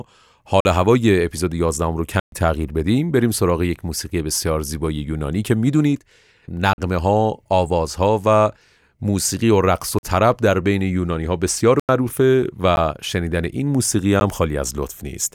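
Blocks of digital silence cut the speech at 0.60–0.65, 2.20–2.32, 6.73–6.78, 9.99–10.03 and 11.80–11.89 s, with brief dips at 12.76 and 14.20 s. Repeated 46 ms holes fit 2048-sample buffers left unfilled, or invalid calculations. Waveforms show flat gaps, and spectrograms show blank vertical stripes.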